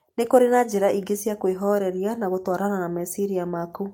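At 1.27 s, just before "kwĩhoreria na", and at 2.51 s, just after it, a lost packet was rebuilt from error correction. Each 20 ms frame plays as a rougher, noisier patch rather than a gap or a smeared repeat.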